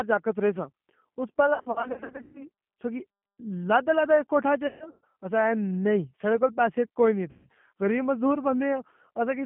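Throughout, the speech passes through the G.729 codec, limited to roughly 150 Hz to 3.4 kHz, with a rough, synthetic edge. That fits an 8 kbit/s model-based coder rather than simple band-limiting, which would only muffle.

VoIP packet loss concealed by the speech codec hits at 1.54–2.46 s, with gaps scattered across that span and runs up to 120 ms. It hits again at 4.67–5.05 s, with runs up to 140 ms, and at 7.31–7.48 s. Unlike plain dropouts, these gaps are not silent: the decoder stretches the last sound into a buzzy tone or coloured noise that fades, and the speech stays weak briefly afterwards.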